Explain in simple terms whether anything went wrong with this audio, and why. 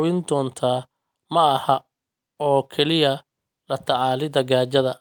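Nothing went wrong with this speech recording; no technical faults can be heard anywhere in it. There is no glitch, dropout or distortion at any point to give a time for.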